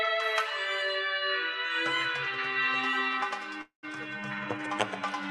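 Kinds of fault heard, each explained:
Call audio freeze: At 3.61 s the sound stops moving forward and stays stalled until about 3.85 s. The last sound is carried on briefly, then fades into silence lasting about 120 ms. When the flow resumes, it picks up exactly where it stopped, so nothing is lost. Instead, about 216 ms of extra time is inserted. The likely cause is packets held up in transit, which left the jitter buffer empty.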